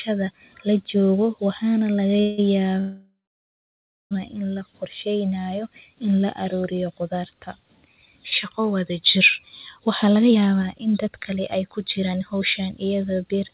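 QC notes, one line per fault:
2.17–2.20 s, short stall from a late packet: the speech holds its last sound for about 20 ms, with a slight buzz or dip, before carrying on from the same point. Nothing is lost. This is consistent with the jitter buffer running dry briefly and stretching audio while waiting.
2.20–2.40 s and 2.80–4.13 s, call audio freeze: the sound turns into a fading continuation of the last sound, 173 ms in the first case and about 1.3 s in the second. The second freeze decays into roughly 1 s of silence before "in la qorsheyneyo in" resumes where it left off, inserting gaps without dropping content. The likely cause is packets held up in transit, emptying the jitter buffer.
9.79–13.49 s, jitter buffer speed-up: after "wada jir" the speech runs about 15% fast at unchanged pitch and sounds hurried, with roughly half a second trimmed overall. This fits a receiver shedding a backlog by repeatedly cutting short pitch-period pieces. 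The 4 kHz top limit heard throughout matches the G.711 call path.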